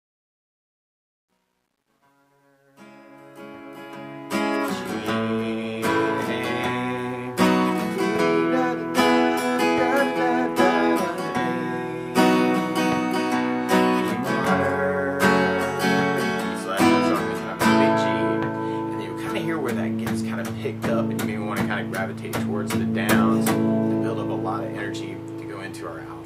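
The level stage applying the fade-in keeps too few bits and adds no dither, which fits an 11-bit word, causing truncation distortion on a fade from 0.0 to 4.72 s. The quiet start, worst up to 3.28 s, turns gritty before the fade reaches full level.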